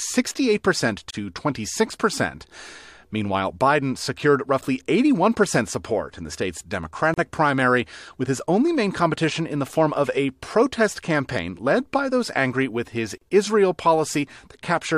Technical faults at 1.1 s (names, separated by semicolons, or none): gap at a join of encoded pieces